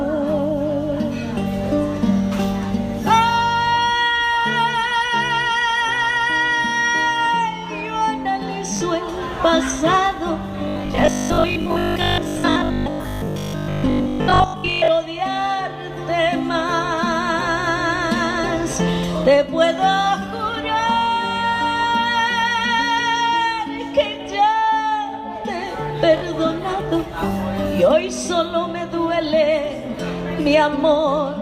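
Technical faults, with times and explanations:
8.77–8.81 s and 26.18–26.22 s: Bluetooth stutter. A short slice repeats while about 40.6 ms of audio is lost each time, consistent with two late or dropped packets.
10.68–14.88 s: robotic sound from repeated short buffers. A rigid 50 Hz buzz overlays most of the sound, likely from 20 ms buffers being replayed when new data arrived too seldom.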